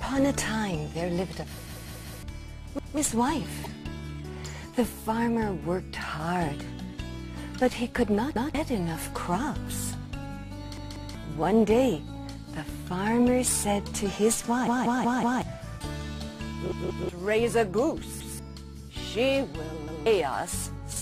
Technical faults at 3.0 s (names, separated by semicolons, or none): repeated buffer